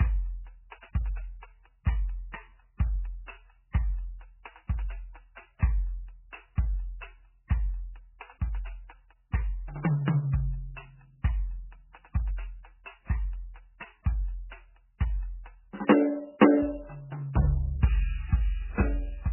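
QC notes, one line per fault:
Throughout: MP3 compression, heavy. The music has nothing above 3 kHz, so the top octaves are simply gone and the sound is dull and boxed-in. The damage is likely from an MP3 encode at a very low rate, around 8 kbps, which fits this. Starved of bits, the encoder drops the treble at a fixed cut-off and zeroes weaker frequency lines, which flicker between frames. That gives the watery, swirling texture and smeared attacks.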